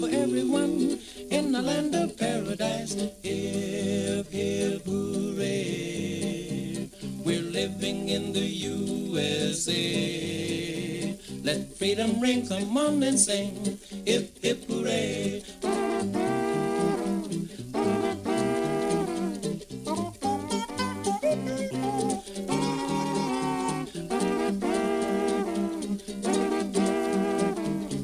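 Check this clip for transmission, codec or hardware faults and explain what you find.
No transmission, codec or hardware faults turn up anywhere in this clip. Nothing in the audio points to a problem along its path.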